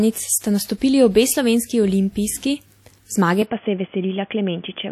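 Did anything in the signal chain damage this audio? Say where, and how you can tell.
Yes, at the codec stage, and it runs through the whole clip. The speech has a ringing, washy quality, with a hiss that swells and fades along with the signal and smears across tens of milliseconds around each sound. The spectrum still reaches 19.7 kHz, so the damage isn't a bandwidth cut. It's quantisation noise spread over long transform blocks, with weaker components dropped. That's likely WMA compression, and the plainly audible damage fits a low bitrate of around 48 kbps.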